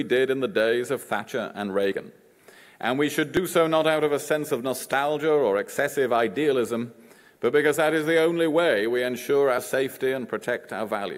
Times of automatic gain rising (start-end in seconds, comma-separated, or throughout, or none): none